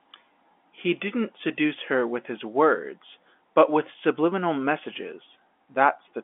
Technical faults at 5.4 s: none

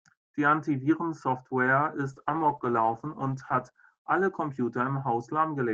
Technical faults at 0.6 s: none

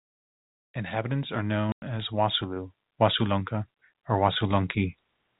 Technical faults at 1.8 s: packet loss filled with silence

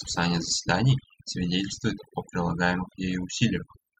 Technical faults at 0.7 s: overdone noise removal

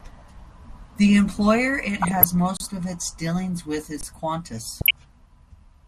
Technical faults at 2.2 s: MP2 compression; DAB burbling

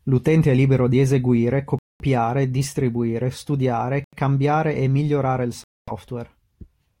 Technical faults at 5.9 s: Bluetooth stall

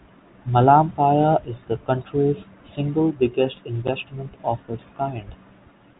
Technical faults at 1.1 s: none

